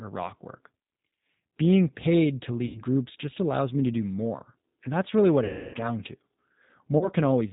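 Throughout, the speech passes through a G.729 codec at 8 kbit/s. Nothing above 4 kHz survives, so the speech sounds band-limited, rough and plainly synthetic. At 2.66 to 2.83 s, 5.44 to 5.77 s and 6.98 to 7.09 s, VoIP packet loss concealed by the speech codec stretches the last sound into a fading buzzy tone or coloured noise, with weak or distorted audio lingering afterwards.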